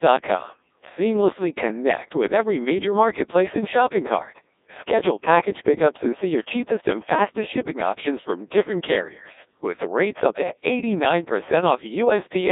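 Speech runs through a Codec 2 vocoder for the whole clip. The voice sounds robotic and buzzy. The decoder does not keep the original waveform. It rebuilds the voice from sine waves, using only pitch, voicing, energy and a coarse spectral envelope. The damage is heavy, which fits the 1.6 kbit/s mode. The band is narrow, from 250 Hz to 3.7 kHz. Nothing is heard above 3.8 kHz.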